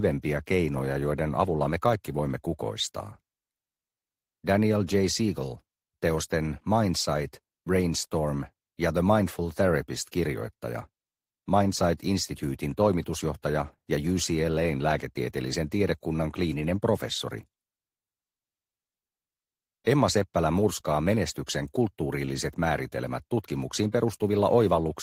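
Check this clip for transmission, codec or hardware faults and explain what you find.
Nothing here points to a transmission, codec or hardware problem; the audio holds steady the whole way and there's nothing to flag.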